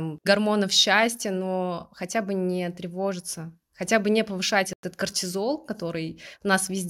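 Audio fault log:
4.73 to 4.84 s, Bluetooth dropout: right after "хотя бы не повышать" the speech cuts out for about 100 ms, then picks up further along as though it kept running underneath. That's likely packets arriving too late for the headphones, roughly five of them discarded, leaving a gap.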